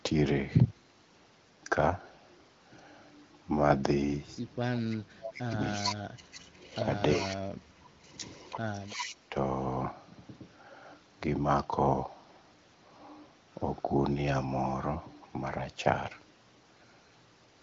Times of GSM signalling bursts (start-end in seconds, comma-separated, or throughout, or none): none